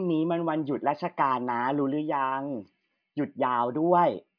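Nothing goes wrong anywhere in this bit of speech, so there's no fault to point to at any moment.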